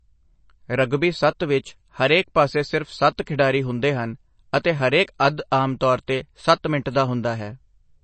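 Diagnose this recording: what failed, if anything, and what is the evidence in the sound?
The codec stage failed: likely MP3 compression starved of bits, fitting about 32 kbps. Nothing survives above 8.3 kHz, and the speech sounds plainly watery throughout.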